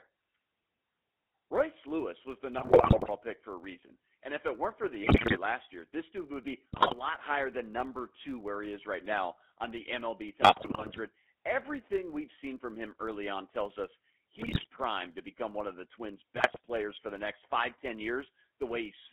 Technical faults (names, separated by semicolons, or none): GSM full-rate codec; filter restarted on every block; GSM bit errors